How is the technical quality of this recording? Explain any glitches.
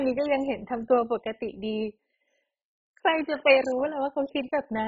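The quality is poor all the way through this speech clip. It's dull, with nothing above 7.5 kHz, plus a gurgling, grainy texture that points to heavy MP2 compression, likely at a very low rate, around 16 kbps. With so few bits, Layer II drops whole upper sub-bands and coarsely quantises the remaining ones, so bands flicker in and out.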